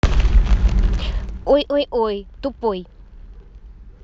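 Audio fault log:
0.85–1.71 s, zipper noise: the level of the speech is pulled down by roughly 25 dB in discrete 2 dB steps, at about ten steps per second, instead of along a continuous ramp. Each jump in gain is an instant discontinuity in the waveform and produces a small click. At this rate the clicks merge into a ticking, zipping texture over the speech for as long as the level is moving.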